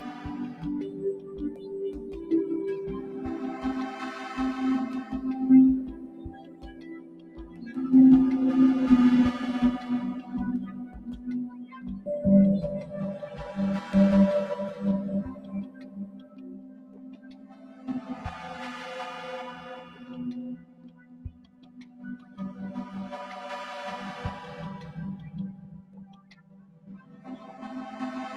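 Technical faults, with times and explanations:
Throughout: noise suppressor applied to music or sounds. A suppressor tuned for speech stays active and treats sustained tones, ambience and reverb as noise, so the level swings by something like 15 dB as it clamps down and releases. Onsets get through while held portions and tails are pulled under, which gives a pumping, fluttering, thinned character. On a waveform, the envelope breathes unnaturally. On a spectrogram, sustained partials and decay regions fade in blotchy patches behind intact transients.
0.00–0.25 s, 0.83–3.24 s, 5.93–7.62 s, 10.93–11.87 s, 15.33–18.24 s, 19.85–22.38 s, 25.54–27.27 s: sound cut by the noise suppressor. In each span the suppressor judges the steady or decaying sound to be noise and attenuates it harder than the surrounding material, by up to about 9 dB (about 5 dB in the opening span, about 8 dB at 10.93 s). 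The dips cover most of each range, around three seconds of the longest one. Sustains sag and tails end early. On a waveform these show as scooped-out stretches after each attack, and on a spectrogram as dimmed bands where energy should persist.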